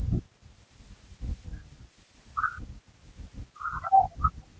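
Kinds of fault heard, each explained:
Echo leak: two brief, faint scraps of delayed speech surface near the end, at 4.12–4.17 s and 4.42–4.46 s, trailing the talker by 236 ms and sitting roughly 30 to 40 dB down, likely loudspeaker pickup the far-end canceller failed to remove.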